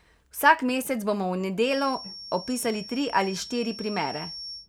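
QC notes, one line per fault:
1.59 to 4.69 s, feedback whistle: right after "mesec bomo v" a thin, steady tone at 5.5 kHz appears and runs to the end of the clip, sitting roughly 15 dB under the speech and swelling and fading slowly in level. It's likely a speaker-to-mic loop hovering right at the edge of feedback, so that one frequency keeps ringing without building into a full howl. That's why it stays narrow and pitched rather than growing.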